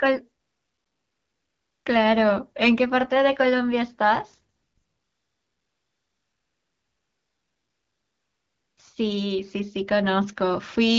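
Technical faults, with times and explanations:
0.41–1.85 s and 4.55–8.77 s, AMR comfort noise: the phone decided nobody was talking and stopped sending speech for 1.44 s and then 4.22 s. The receiver filled those gaps with smooth synthetic hiss in place of the real background, so it audibly switches in and out. The wideband coding around it sounds clean, which fits a 12.65 kbit/s mode.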